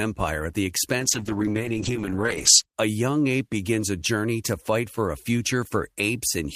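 From 1.0 s, after "at the", a call bitrate drop starves the encoder. The sound turns coarse and watery, and bandwidth narrows from 20 kHz to 8 kHz, which fits a fall from 32 to 8 kbps. Quality recovers by 2.77 s, before "a young ape begins".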